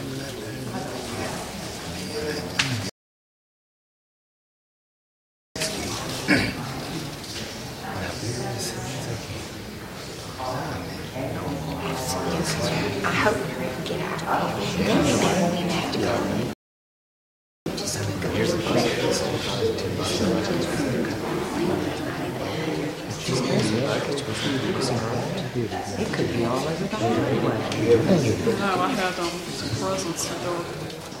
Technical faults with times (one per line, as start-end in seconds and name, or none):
2.89-5.56 rebuffering stall
16.53-17.66 rebuffering stall